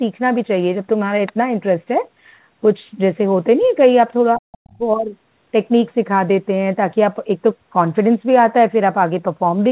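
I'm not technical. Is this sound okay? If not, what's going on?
No. There are two problems, both in the middle of this speech clip.

The first is the other side's voice leaking through. It happens at 3.62 to 3.68 seconds and again at 4.72 to 4.77 seconds. Each time, a faint, very brief scrap of a second voice sneaks in behind the main talker. The likely cause is that the talker's phone or computer played the other person out loud. Its echo cancelling then failed to clean that sound out of the microphone.

The second is speech suppressed in double talk. It happens between 4.35 and 4.82 seconds. For about 0.4 seconds in total, the main voice drops sharply, at its worst almost to nothing. This is probably because both people spoke at once. The echo cancelling could not tell the talker apart from the echo, so it turned everything down together.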